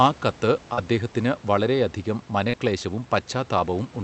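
At 0.73 to 0.79 s and again at 2.49 to 2.55 s, there is short concealed packet loss. About 40 ms of the speech arrived too late each time. The receiver extended the preceding sound, then blended back. Each gap is heard as a brief smear.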